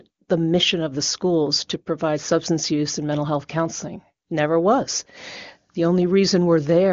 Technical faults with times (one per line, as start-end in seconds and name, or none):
none